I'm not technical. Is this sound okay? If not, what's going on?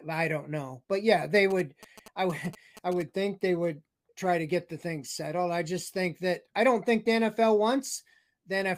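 No. From about 1.36 to 3.02 seconds, a quick, galloping dit-dit-dit of short buzzes sits fairly quietly under the speech. These are GSM signalling bursts: an older 2G mobile phone nearby was exchanging brief radio messages with its network, as it does before a call or text comes in. The recording equipment picked up that radio energy and turned it into sound, giving a buzz at about 217 Hz.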